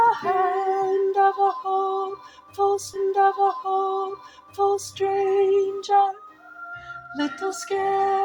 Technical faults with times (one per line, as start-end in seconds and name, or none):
2.93-4.93 stream segment repeated